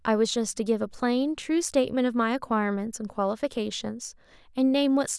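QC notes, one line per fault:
No faults heard anywhere in this speech recording.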